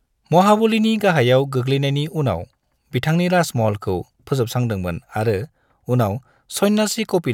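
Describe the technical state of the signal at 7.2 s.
At 7.2 s the speech signal is intact, with no dropout, clipping, glitch or other fault at that moment.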